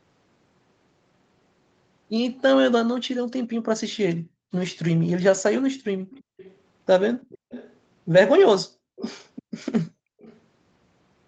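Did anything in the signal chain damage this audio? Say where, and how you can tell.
Yes. In the call processing stage, the background gated by the echo canceller drops the room sound by about 40 dB at 3.18–4.52 s, 5.7–6.37 s, 7.38–7.5 s, 8.67–8.96 s and 9.9–10.2 s. The canceller clamped the microphone while far-end audio played, then released it.

A faint delayed copy of the speech trails the main signal by 340 ms, about 25 dB down at 6.1–7.75 s and about 20 dB down at 8.96–10.39 s. This is likely an echo leak, where loudspeaker sound reached the microphone and the canceller left a residue that was sent back.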